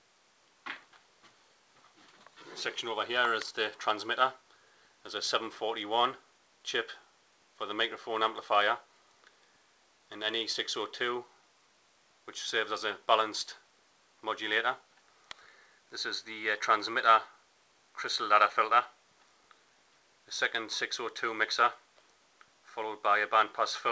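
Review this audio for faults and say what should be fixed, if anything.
No faults found; nothing needs fixing.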